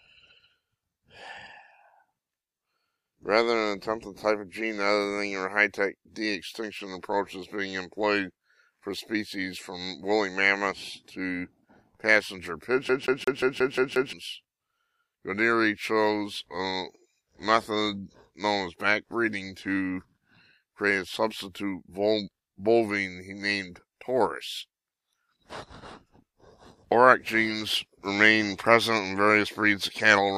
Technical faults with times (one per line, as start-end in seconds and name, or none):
12.89-14.13 CD stuck on one turn